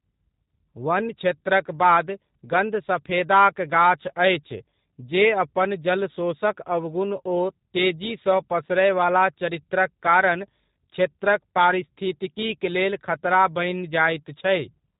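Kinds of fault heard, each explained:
G.729 codec: The whole clip carries G.729 coding, and the damage is plainly audible. This codec rebuilds speech from a model instead of sending the waveform itself. It models the vocal tract as a filter, adds a pitch predictor, and places a few pulses in each short frame. Here nothing above 3.8 kHz survives, so the speech sounds narrow and muffled. It is also rough and synthetic throughout, which fits an 8 kbit/s rate.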